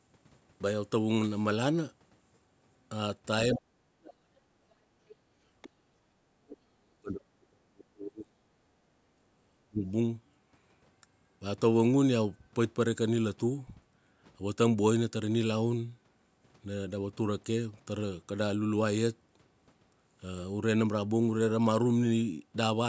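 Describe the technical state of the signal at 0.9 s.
At 0.9 s the audio is intact, with only the normal band limit of call microphone processing, which leaves nothing above 8 kHz.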